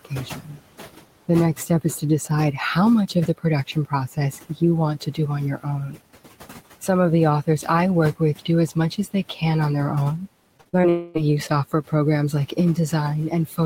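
The noise suppressor runs through the whole clip, pulling the room noise down by about 17 dB. That noise sits about 18 dB below the speech. The suppressor decides band by band and frame by frame what counts as steady noise, so the residual background pumps down in pauses and swells back under the speech.

The same suppressor also cuts into the speech itself, mistaking low-level speech energy for background. This happens at 0.05 to 0.58 s (dips of up to about 14 dB, roughly a fifth of a second affected), 1.28 to 2.3 s (up to about 16 dB), 3.08 to 6.0 s (up to about 17 dB, around half a second in total), 7.47 to 9.42 s (up to about 15 dB) and 12.48 to 13.65 s (up to about 11 dB). Soft consonants and trailing syllables in these spans sound swallowed or faded rather than cleanly spoken.

From 10.57 to 10.85 s there is repeated packet loss. Four short holes, the longest 41 ms, add up to about 120 ms of missing audio. 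Each is patched by extending the preceding sound, and concealment covers about 43% of the span. The holes come close together, so this stretch sounds choppy, with pieces missing.

Right after, from 10.89 to 11.17 s, about 260 ms of audio is missing. The gap is bridged entirely by a stretched continuation of the last sound, a fading buzz or hiss with no silence. The audio then resumes without that portion. This is likely a long network dropout.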